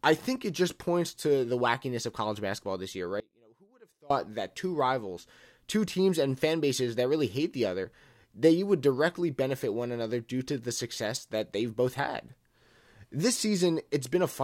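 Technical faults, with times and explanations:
3.20–4.10 s, audio dropout to a faint residue. After "college basketball this year" the speech cuts abruptly to a faint trace, about 30 dB down. It returns at "that two rivals two". Likely the signal was lost while the path stayed live.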